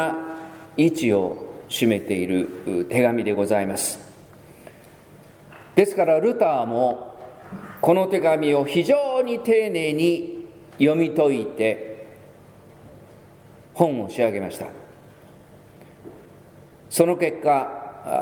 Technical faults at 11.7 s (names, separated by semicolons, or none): clock drift between sender and receiver; repeated timing corrections